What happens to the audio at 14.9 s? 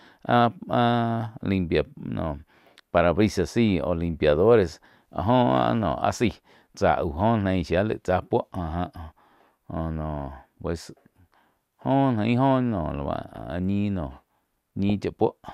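A brief glitch cuts into the speech at about 14.89 s, peaking at roughly -15 dBFS. This is a corrupt frame decoded: flipped bits in a few compressed frames were played anyway, so misread gains and codes put energy at the wrong frequencies for that instant.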